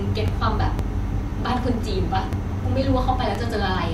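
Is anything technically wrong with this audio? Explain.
Yes. The speech has overlapping chunks: at 0.28, 0.79, 1.30, 1.82, 2.33, 2.84 and 3.35 s, each half-second block begins 12 ms before the previous one ended, so that sliver repeats at every join, producing a regular clicking stutter.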